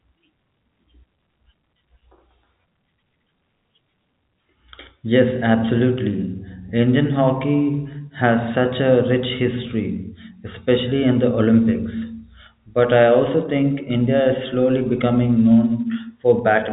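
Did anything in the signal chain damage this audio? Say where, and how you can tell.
No, nothing in the chain damaged this audio.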